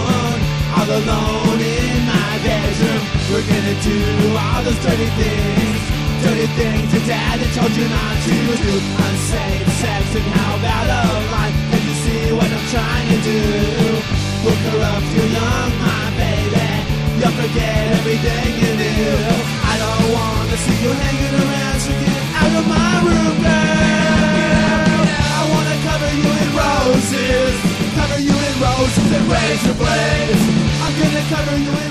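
At 30.88 s a repeated buffer occurs: fresh audio failed to arrive in time, so the device replayed its last block, about 1.45 ms long, which fits a 64-sample buffer, four extra times. Around 5 ms of sound is lost, heard as a brief click-like buzz.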